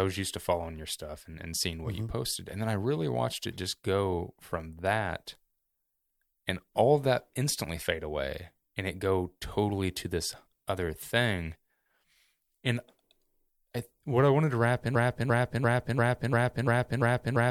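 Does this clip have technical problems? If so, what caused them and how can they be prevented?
Yes. Right after "wanted to wrap in", at 14.95 s, a 0.34 s piece of speech repeats back to back seven times through the end of the clip: a broken-record loop. The likely cause is a stalled player or stream resending its last fragment, so the speech meant for that stretch is lost. Detecting stalls and restarting the stream prevents it.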